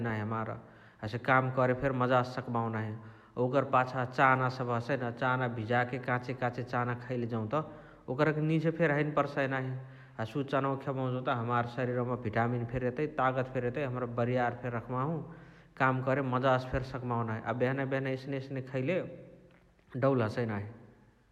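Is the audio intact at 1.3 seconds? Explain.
Yes, the speech at 1.3 seconds plays through intact, with no dropout, click, distortion or other fault at that point.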